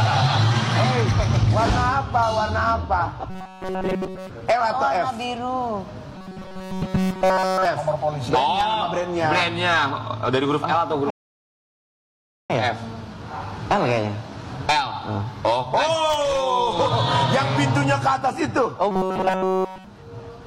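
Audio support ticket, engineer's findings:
Rigid metallic buzz locked at 188 Hz, 3.30–4.30 s. Robotic sound from repeated short buffers. Likely cause: starved playback buffer looping a roughly 5.3 ms chunk.
Same 188 Hz buzz, 6.15–7.65 s and 18.91–19.85 s. Nearly all real audio skipped in each span. One repeat per cycle sets the fixed pitch.

Hard cut to silence, 11.10–12.50 s, then the audio resumes exactly where it stopped. Rebuffering stall: the player drained its downloaded audio and waited for more. Nothing lost. About 1.4 s added to the timeline.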